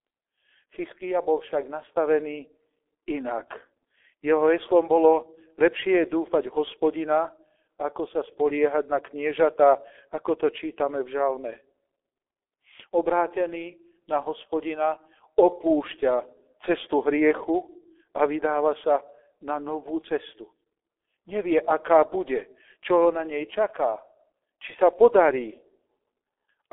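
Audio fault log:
Throughout, G.723.1 codec: the speech sounds heavily muffled and hoarse, with nothing above 3.7 kHz and a thin low end that fits a 300 Hz to 3.5 kHz telephone band. Consonants blur because the coder refreshes its voice model only once per 30 ms frame, and the rasp points to a rate near 6.3 kbit/s. Plain telephone filtering stays clean within its band; here the grit and smeared onsets come from the coding itself.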